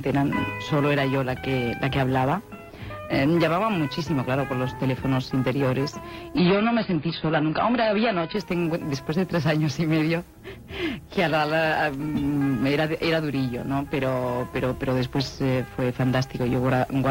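From 6.37 to 8.37 s the adaptive stream switches to a lower bitrate, a drop that points to AAC falling from about 96 to 16 kbit/s. Everything above 5.2 kHz vanishes, artefacts thicken, and quality changes abruptly at both ends without any gap.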